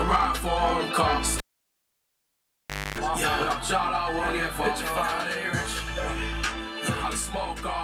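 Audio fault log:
1.38 to 2.98 s, cable pulled and plugged in: a pop marks the moment the live lead comes out, and the signal drops to near silence for about 1.56 s because nothing is connected to the input. As the plug goes back, only its tip touches at first, so the open, unshielded connection picks up 50 Hz mains hum as a buzz lasting about 260 ms. A second pop follows when full contact is made and the sound returns.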